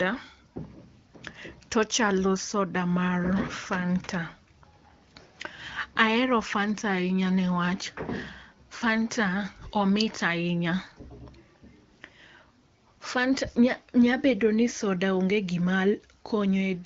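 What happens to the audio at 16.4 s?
Nothing goes wrong at 16.4 s: the speech passes intact through the AMR wideband (HD Voice) path, which simply leaves nothing above about 7.1 kHz.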